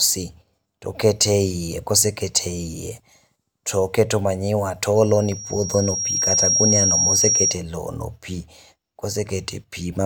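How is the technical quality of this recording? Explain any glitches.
The recording is marred by one clear fault, a loudspeaker feedback squeal, from 4.95 to 7.61 s, starting just after "toketo manyiwa to" and gone by "lowono pi". The microphone is picking up the loudspeaker it feeds, and at about 5.6 kHz the loop gain rises above one, so that tone regenerates on every pass. It swells over roughly a second and a half to sit a few decibels above the speech. That gradual self-building rise sets it apart from a steady interference whine, which would be present at full level throughout.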